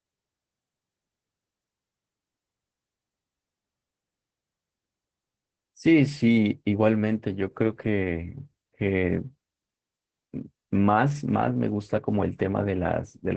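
Throughout the speech the sound is muffled, hoarse and faintly robotic, with nothing above about 8.6 kHz. This is Opus voice compression: its SILK coder, held to wideband, codes the excitation coarsely at a rate that points to roughly 10 kbps.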